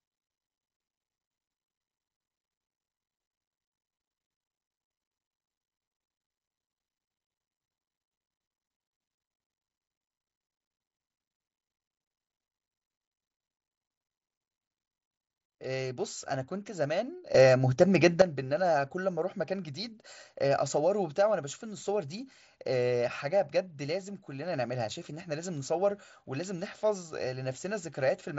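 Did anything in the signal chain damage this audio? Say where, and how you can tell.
Yes. A sudden gain jump, likely an unramped digital gain change, lifts speech and background noise together by about 11 dB from 17.35 to 18.22 s.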